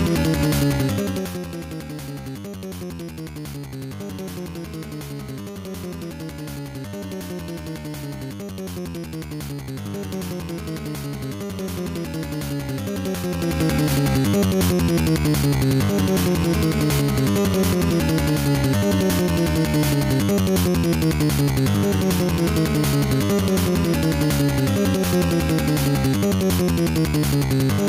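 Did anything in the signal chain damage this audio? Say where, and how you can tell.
Yes. Gain pumping runs through the whole clip, 0 to 28 s. The gain ducks by around 10 dB each time a loud sound arrives, so loud and quiet passages sit unnaturally close in level and everything sounds squashed. The damage sits at the input stage: input gain likely set far too high for the microphone, with a fast limiter or compressor clamping down on each peak and releasing in the pauses.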